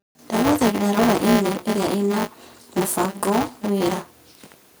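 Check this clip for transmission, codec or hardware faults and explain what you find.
Two faults are audible in the speech: buffer tearing runs through the whole clip, and microphone overload hits one loud stretch.

Buffer tearing is present from start to finish as a steady robotic buzz at 200 Hz. The writing program and the hardware reading the ring buffer have drifted so they cross mid-period. About a fifth of each period carries stale audio from around 20 ms earlier, with hard joins on both edges. The buzz appears only while speech is present. That sets it apart from mains hum, which persists through pauses and sits at 50 or 60 Hz rather than tracking a buffer rate.

Microphone overload occurs from 0.97 to 1.36 s. The loudest syllables pick up a harsh, crackling edge, with peaks pushing about 4 dB past the converter's limit and a small share of samples flattened. The likely cause is microphone input gain set too high, so the peaks hit the converter's limit and their tops were cut off. 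Unlike the tearing buzz, this distortion is confined to that loud stretch and follows the level of the speech, not a fixed repetition rate.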